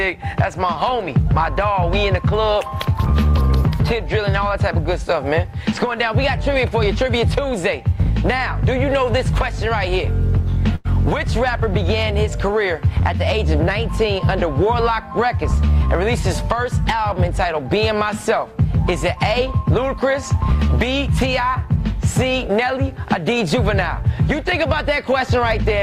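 At 10.75 s a burst of packet loss leaves a gap of about 94 ms, filled by stretching the last sound and fading it, as a held buzz or dimming hiss, rather than silence. About 100 ms of audio is then skipped before playback resumes at 10.87 s.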